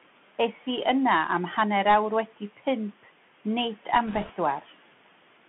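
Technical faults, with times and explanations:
Throughout: Bluetooth CVSD headset codec. The sound is squeezed into a telephone-like band of roughly 150 Hz to 3.4 kHz, and its texture is plainly damaged. It fits a 64 kbps one-bit delta stream whose step size chases the waveform. Loud, fast-rising high sounds outrun that step and smear, sibilants turn scratchy, and a fine granular hiss sits under the speech. That hiss differs from the room noise, which sits about 21 dB below the speech and follows the signal far less closely.
0.53–0.64 s: speech cut by the noise suppressor. For about a tenth of a second the speech sinks by up to about 7 dB, as if swallowed, and then returns. The suppressor mistook this stretch of speech for background and turned it down along with the room noise. The sound grows faint without gaining any crackle or hiss, and that separates it from codec damage or transmission errors. 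It is only a brief dip in level.
4.07–4.32 s: bit errors on a Bluetooth voice link. For a quarter of a second a rushing, crackly roughness spreads over the speech. It fits an error rate of a few percent on the headset link. In a one-bit delta stream each flipped bit nudges the waveform by one step, sized to the speech level, and the decoder's decay soon pulls it back. The result is a dense grit rather than the sharp clicks or dropouts that packet loss leaves.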